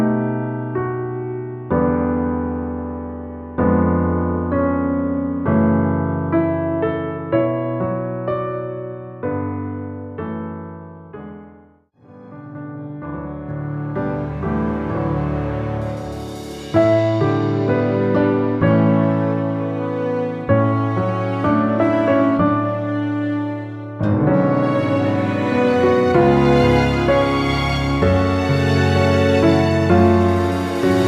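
Nothing stood out on listening to the clip.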